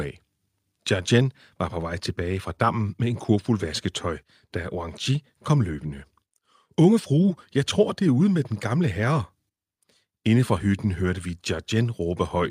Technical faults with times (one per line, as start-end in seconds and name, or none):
none